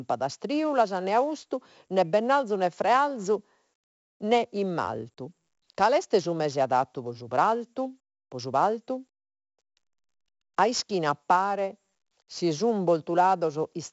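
Throughout the speech, heavy 4-bit ADPCM compression, at a rate fitting 64 kbps, coarsely quantises each sample, leaving gritty hiss that tracks loudness and nothing above 7.7 kHz.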